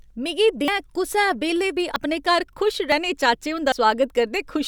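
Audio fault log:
0.68 s, 1.96 s, 2.92 s, 3.72 s: dropped buffer (overrun). At each point the speech jumps straight ahead with no silence. At 0.68 s, just before "कुसै बेल्लै बी अपने", roughly a tenth of a second is lost. At 1.96 s, between "कुसै बेल्लै बी" and "अपने घर", and at 2.92 s, after "बेल्लै बी अपने घर", a few tens of milliseconds are lost. At 3.72 s somewhat more is lost. Likely cause: the hardware overwrote samples before the program collected them, so the audio on either side is spliced together.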